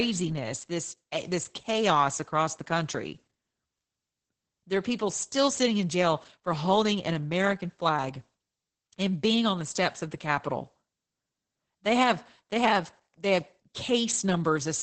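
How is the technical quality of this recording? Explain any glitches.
The quality is poor throughout. Opus voice compression runs the full clip: heavy SILK coding, consistent with roughly 10 kbps, removes everything above 8.7 kHz and coarsely quantises excitation, leaving the speech muffled, hoarse and slightly robotic.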